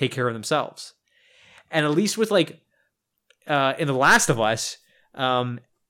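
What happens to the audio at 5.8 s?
Nothing goes wrong at 5.8 s; the speech continues intact through that moment.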